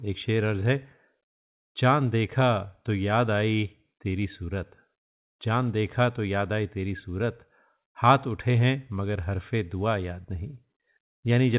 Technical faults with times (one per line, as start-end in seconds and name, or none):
none